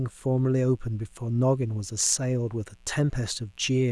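A steady, raspy mains buzz sits low beneath the speech throughout, from spiky switching interference on a 60 Hz supply whose harmonics climb into the kilohertz range.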